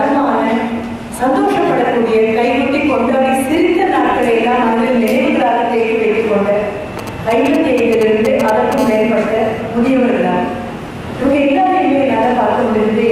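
From 6.99 s to 8.74 s, GSM signalling bursts break in. A 2G phone close by is sending short clusters of radio pulses, the kind of traffic that comes before a call or a message. The audio circuitry rectifies those pulses into sound. The result is a galloping dit-dit-dit of brief buzzes at about 217 Hz. It sits only around 10 dB under the wanted sound.

At 8.78 s it turns into a steady GSM phone buzz, which lasts until 9.61 s. The phone is now holding a call and transmitting its bursts continuously, 217 times a second. Rectified, that becomes a hard, raspy drone at 217 Hz. It is rich in harmonics and has nothing to do with the audio itself. It runs about 18 dB below the signal, lower than the bursts before it but constant.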